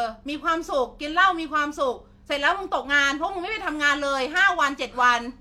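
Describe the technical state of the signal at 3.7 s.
At 3.7 s the speech signal is intact, with no audible fault at that point.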